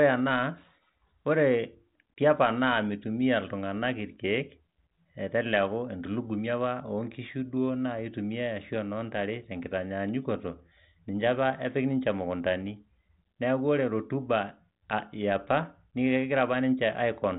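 No technical faults can be heard in the speech, which is carried by G.726 ADPCM at 40 kbit/s with nothing above about 3.9 kHz and at most a faint trace of coding hiss.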